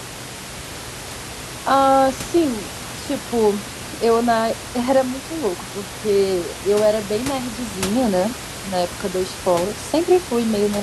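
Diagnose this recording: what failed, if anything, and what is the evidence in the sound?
Nothing failed; no faults found.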